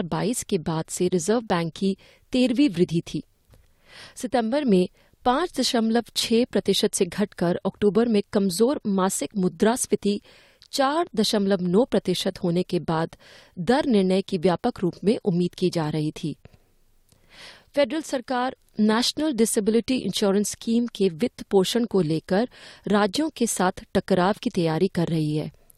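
At 21.73 s an electrical switching spike puts a brief, moderate-level snap on top of the speech, likely from a nearby switch arcing; unlike a dropout, nothing underneath is interrupted.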